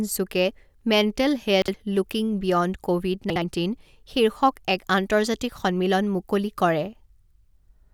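At 1.62 to 1.74 s and again at 3.30 to 3.42 s, chunks out of order: a 60 ms block plays one block late, swapping with its neighbour. A brief jumbled hiccup results; spectrograms show harmonics jumping and thin broadband lines at three hard joins.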